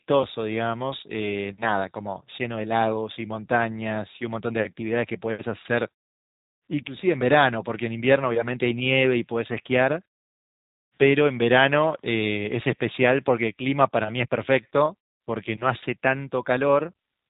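A speech recording that's been through the G.729 codec the whole way, with plainly audible damage: nothing above about 3.8 kHz, and a rough, slightly synthetic edge from the filter-and-pulse rebuild, which fits an 8 kbit/s VoIP link. The pauses mute cleanly between phrases.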